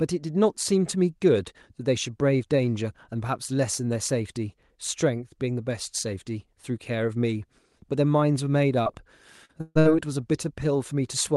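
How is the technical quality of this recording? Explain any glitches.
The speech in this recording is damaged by packet loss just before the end, around 8.8 to 9.9 s. It was carried over a call codec whose bandwidth stops near 12 kHz.

Short concealed packet loss, at 8.83 to 8.87 s and 9.45 to 9.51 s: about 20 ms and then 40 ms of audio reached the decoder too late. The receiver continued the preceding sound to cover each gap and blended back, leaving a brief smear or wobble.

Burst of packet loss, at 9.61 to 9.77 s and 9.79 to 9.87 s: runs of consecutive packets were lost, about 140 ms and then 60 ms. The decoder stretched the last sound while fading it, with a moment of silence in the first, so a held buzz or fading hiss stands in for the missing speech.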